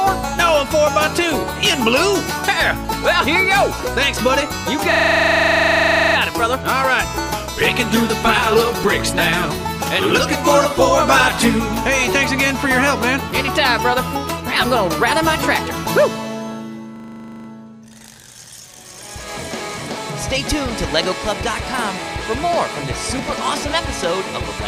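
The audio twice freezes into a system hang loop, from 4.92 to 6.16 s and from 16.96 to 17.48 s. A 40 ms slice repeats exactly, giving a rough buzz at 25 Hz. The system stalled while the sound hardware kept replaying its buffer.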